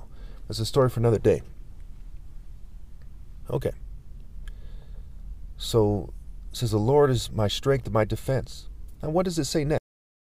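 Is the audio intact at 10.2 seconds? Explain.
No. At 10.2 seconds the clip is inside a cut-off end: the final buffers were never written or played back, so nothing real is there. From 9.78 s to the end, the file holds digital silence instead of the rest of the sound. The audio stops abruptly at 9.78 s, mid-sound with no natural decay or tail, and 10.2 s falls in the dead stretch that follows.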